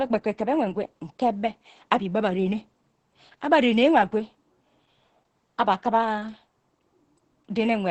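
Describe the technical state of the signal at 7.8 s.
At 7.8 s the speech sounds muffled, hoarse and faintly robotic, with nothing above about 8.5 kHz. This is Opus voice compression, present throughout the clip rather than just at this moment. The SILK linear-prediction coder is running in wideband mode, which caps the band near 8 kHz, and its excitation is coded coarsely. The heavy damage to voice texture points to a bitrate around 10 kbps.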